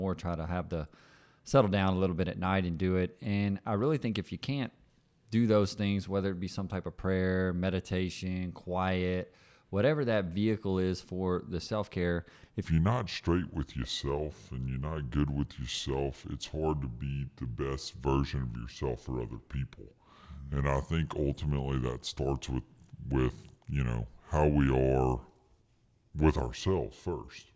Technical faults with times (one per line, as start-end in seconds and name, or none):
12.65-27.56 wrong sample rate